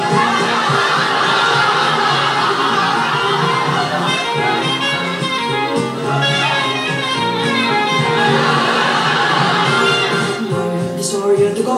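Nothing here needs flagging, as there's no technical fault anywhere in this audio.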